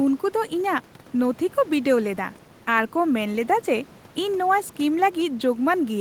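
Nothing stood out on listening to this speech recording, with only a faint room noise sitting about 23 dB below the voice.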